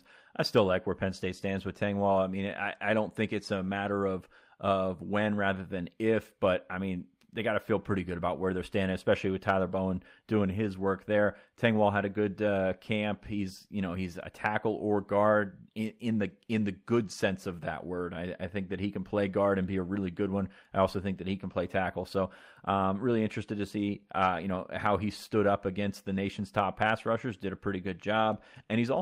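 At 10.79–10.81 s and 17.07–17.13 s, a lost packet rebuilt from error correction: low-bitrate redundant copies fill the gaps, leaving brief, rougher, noisier speech with no dropout.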